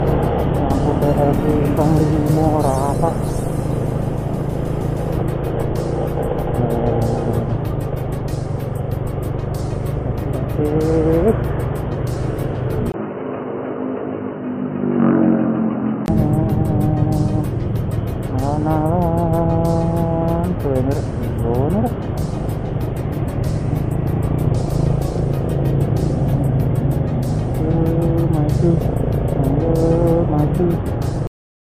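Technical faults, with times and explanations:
12.92 to 16.08 s, input switched to a poorer device: after a 20 ms gap the sound turns dull and boxy, with nothing above 3 kHz, a level drop of about 5 dB and a new noise floor roughly 40 dB down. It clears again at 16.08 s. The likely cause is the recording input moving to a narrower-band microphone or headset profile and back.
31.27 s, cut-off end: the audio stops abruptly in the middle of a sound and falls straight to digital silence with no decay. The final buffers were never written, so the waveform is truncated rather than ending naturally.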